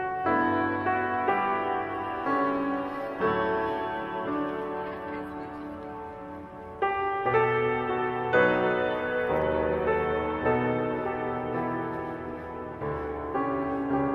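No technical fault can be heard anywhere in this audio. There is nothing here that needs a time or a cause.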